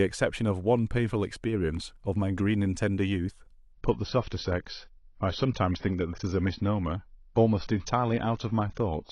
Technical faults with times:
3.73-9.12 adaptive stream at a lower bitrate

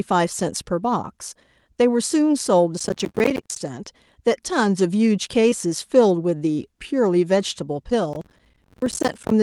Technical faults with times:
2.79-3.57 processor overload crackle
5.49-5.53 short concealed packet loss
8.13-9.31 processor overload crackle

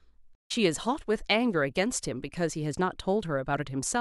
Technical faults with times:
0.35-0.52 stream reconnect

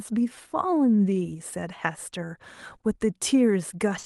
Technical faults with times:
0.00-4.06 clock drift between sender and receiver
0.04-3.89 repeated timing corrections
2.76-2.82 short stall from a late packet
3.99-4.06 short stall from a late packet

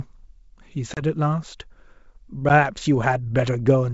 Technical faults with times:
0.94-1.02 packet loss on an ADPCM call
2.49 packet loss on an ADPCM call

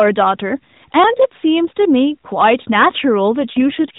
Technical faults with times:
0.00-0.31 hard clipping
0.95-1.25 hard clipping
2.41-3.11 hard clipping
3.41-3.99 AMR rate drop

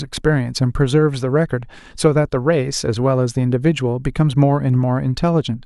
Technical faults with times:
none

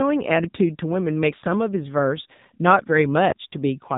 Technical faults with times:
0.00-3.97 AMR narrowband mobile codec
1.32 dropped buffer (overrun)

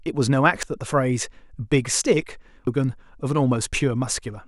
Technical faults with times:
0.63 damaged data in a compressed stream
2.67 damaged data in a compressed stream

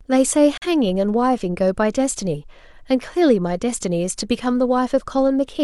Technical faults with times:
0.57-0.66 digital broadcast dropout

